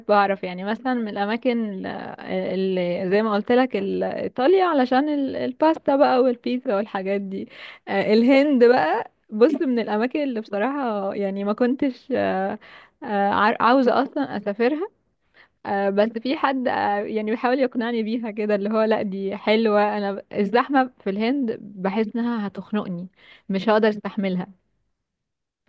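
Nothing goes wrong anywhere in this speech recording, so there are no technical faults to point out.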